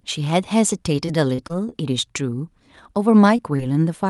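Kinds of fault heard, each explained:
Repeated packet loss (robotic sound): Packets kept failing to arrive in time between 1.05 and 1.74 s, so the receiver had to invent sound four times in quick succession, each time stretching the last stretch of audio across the hole, the longest hole being about 25 ms. Around an eighth of that span is guessed rather than real, and the speech turns choppy, with small pieces dropping out before it recovers.
Short concealed packet loss: Twice late in the clip, at 3.37–3.40 s and 3.56–3.60 s, about 20 ms of audio never reached the decoder, and the receiver covered each gap by extending the preceding sound before blending back into the real signal. These register as two brief smears or wobbles in the speech.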